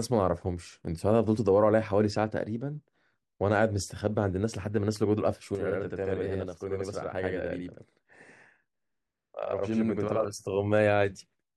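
From 5.55 s to 10.25 s, the speech doubles. This is a channel delay. One channel runs about 85 ms late, which fits a 4096-sample buffer, and both are summed to mono. The late copy sounds as a distinct slap echo at equal level.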